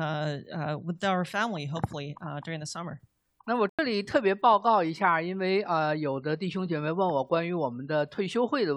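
At 3.69 s the sound drops into a corrupt frame muted gap of about 94 ms. The decoder rejected a damaged frame and the player substituted silence. The hole starts abruptly.

At 7.34 s a corrupt FLAC frame produces a brief error peaking at about -26 dBFS. Flipped bits threw off the prediction for about 2 ms.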